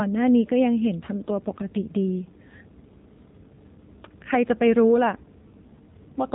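From start to finish, the speech carries AMR narrowband mobile codec damage. Nothing above 3.8 kHz survives, so the voice sounds thin and phone-like. The codec rebuilds each 20 ms frame from a vocal-tract model and sparse pulses. The plainly audible buzzy, synthetic edge points to a low mode near 7.4 kbps.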